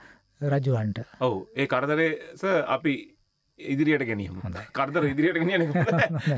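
No technical faults can be heard anywhere in this clip. Nothing in the audio stands out as a problem worth describing.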